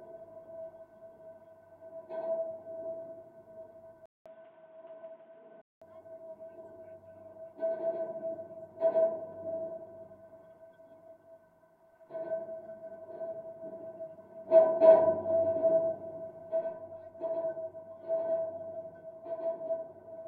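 From 4.06 to 5.82 s the sound goes dull and boxy, with nothing above 3.8 kHz and a 200 ms gap first, likely an input switched to a poorer device.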